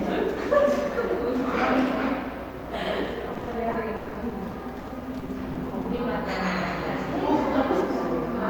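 From 3.33 to 6.00 s, packets kept arriving lost or late, repeated packet loss, with close to twenty holes patched by stretching the preceding sound. Roughly half a second is filler and about a third of a second simply missing, so the sound turns choppy and robotic.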